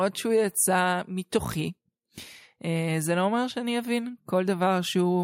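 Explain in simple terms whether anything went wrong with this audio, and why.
Listening to the speech in this clip, nothing went wrong that could be heard.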